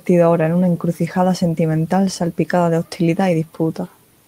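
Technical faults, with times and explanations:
No technical faults can be heard in this speech recording, and the signal stays continuous and steady throughout.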